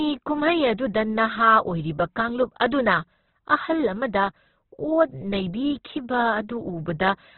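Opus compression, heard across the whole clip, is the likely cause of the rough, grainy speech: nothing survives above 4.2 kHz, and the CELT music mode, starved at a rate that fits about 12 kbps, fills bands with folded or noisy energy, leaving tones noisy and coarse.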